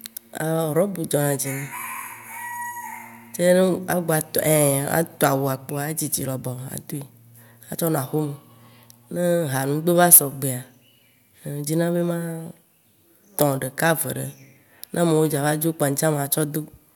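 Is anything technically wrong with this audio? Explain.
Yes, there's a burst of hard clipping from 10.01 to 10.18 s, right after "ha nugbe". The speech runs about 10 dB past what the stage can pass, so the peaks get sliced flat, throwing off high harmonics you hear as a brief harsh, crackly fuzz.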